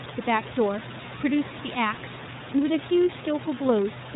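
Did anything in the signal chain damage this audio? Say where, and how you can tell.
Yes. iLBC codec damage runs throughout the speech, at the codec stage: nothing above 4 kHz survives, and the speech has a plainly rough, synthetic grain from each 30 ms frame's excitation being coded independently, pointing to the 13.33 kbps mode. The room noise sits about 11 dB below the speech.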